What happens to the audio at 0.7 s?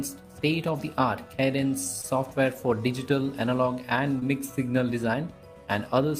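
Nothing goes wrong at 0.7 s; the audio plays through that moment intact, with no dropout, click or distortion.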